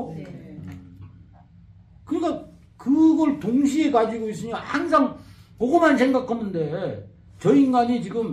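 No technical faults are audible in this audio.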